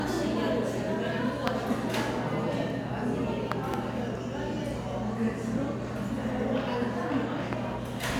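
A loud pop hits at 1.48 s, jumping about 25 dB above the sound, then a quick double pop between 3.52 and 3.76 s and another at 7.53 s, both about 20 dB up. Likely a voltage spike from a plug, switch or static.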